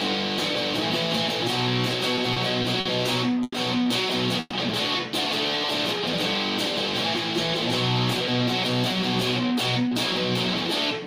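From 2.15 to 2.87 s there are repeated stalls, a stutter. The sound catches four times in under a second. Packets came late, and the jitter buffer ran dry again and again. Each time, the receiver held the last sound going to cover the gap. About 120 ms is filled this way, the longest hold about 50 ms. That is roughly a sixth of the span. Nothing is lost. The passage just drags and hiccups.

At 3.43 to 3.54 s comes a short stall from a late packet. One packet missed its slot. The delay jumped by 90 ms. With the buffer empty, the receiver stretched the last sound for about 90 ms. Then it picked up exactly where it stopped. No audio is missing. One moment simply hangs on too long, with a faint buzzy, dipping quality.

From 4.40 to 4.53 s there is a call audio freeze. The sound locks in place for about 110 ms. It turns into a brief fading buzz or hiss, ending in roughly 10 ms of near silence. 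Then the audio resumes from the same point. Nothing is skipped. A small gap has been inserted instead. The likely cause is packets held up in transit, with the delay rising by about 110 ms and the buffer running empty.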